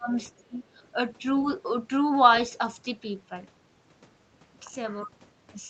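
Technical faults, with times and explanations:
0.00–0.12 s and 0.40–0.63 s, speech suppressed in double talk: the talker's level drops sharply, by around 25 dB at the deepest, for roughly a tenth and then a fifth of a second. This is likely an echo canceller turning everything down while both sides talked at once.
0.78–0.87 s, other side's voice leaking through: a brief, very faint second voice sits far beneath the talker, around 40 dB lower. Its likely source is the far end playing from a loudspeaker, with the echo canceller not fully removing it from the microphone.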